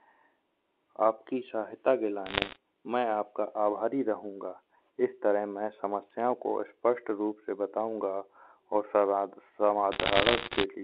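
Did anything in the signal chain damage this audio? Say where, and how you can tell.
Yes. Bit errors on a digital phone line, at the transmission stage after G.711 mu-law coding, put crackle over the sound from 2.26 to 2.56 s, between "आपकी सहायता के" and "मैं आपका आभारी रहूंगा", and again from 9.92 to 10.64 s, where the burst is denser. Each flipped bit corrupts a single sample, so hits on sign or high-order bits become sharp isolated ticks. The error rate works out to roughly one percent, a little higher in the second burst. The speech carries on unbroken underneath, which rules out packet loss or concealment gaps, and the ticks are scattered single-sample spikes, unlike clipping.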